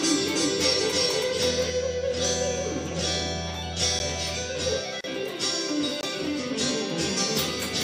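From the start until 1.7 s, a doubled audio track runs: a second full-band copy, roughly equal in level, trails by about 300 ms and stops abruptly, likely from a slower second capture path. At 3.99 s and again from 6.01 to 6.03 s, a block of digital silence (10 ms, then 20 ms) drops the output to silence with hard edges. From 5.01 to 5.04 s, a gap at a join of encoded pieces leaves a 34 ms gap with smeared edges, where untrimmed encoder delay and padding remain.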